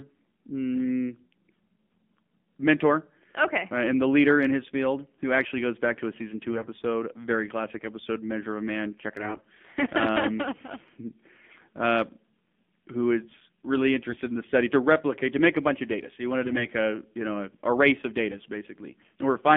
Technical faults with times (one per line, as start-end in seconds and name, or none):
0.00-19.56 AMR narrowband mobile codec
6.50-6.68 AMR bit errors
9.16-9.45 AMR bit errors
14.09-14.20 AMR bit errors
16.44-16.66 AMR bit errors